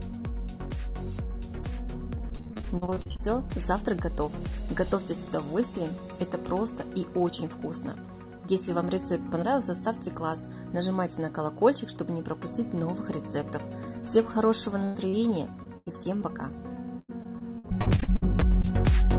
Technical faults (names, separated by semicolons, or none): repeated packet loss (robotic sound)